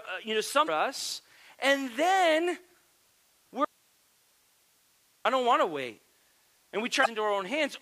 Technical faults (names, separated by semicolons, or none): damaged data in a compressed stream; audio dropout to a faint residue